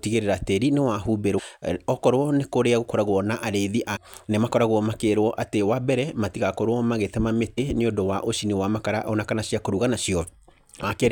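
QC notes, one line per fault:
1.37–1.40 s, 3.95–3.97 s, 7.57 s and 10.82 s: damaged data in a compressed stream. Each is a brief glitch lasting about 13 to 24 ms, where the decoder hits corrupt frames, loses sync and resumes at the next header.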